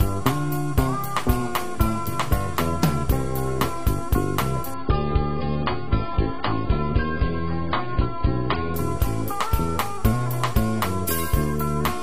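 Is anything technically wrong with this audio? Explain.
Yes. From 4.74 to 8.74 s it's an adaptive stream at a lower bitrate: the connection sagged and playback switched to a much leaner version. Everything above about 5.1 kHz vanishes, the sound turns dull and smeary, then snaps back with no gap.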